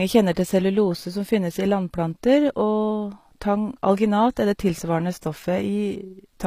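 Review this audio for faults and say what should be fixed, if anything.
Throughout the clip, the treble of the speech sounds synthetic. S sounds come out gritty and metallic. The top end stays bright but does not match the harmonics below it, and nothing is present above 15.5 kHz. This is likely HE-AAC compression. The codec keeps only the lower spectrum and rebuilds the highs by copying lower bands upward under a coarse envelope. The damage is plainly audible, which points to a low bitrate in the region of 24 kbps. To prevent it, encode at a higher bitrate with plain AAC-LC or another full-band codec instead of band replication.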